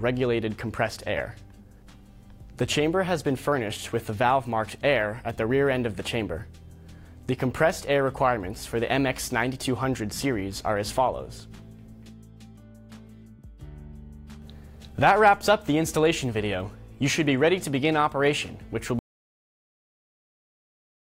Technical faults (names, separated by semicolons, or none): audio dropout to silence